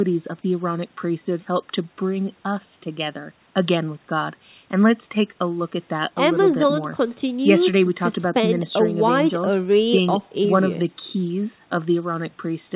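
No faults can be heard anywhere in this recording.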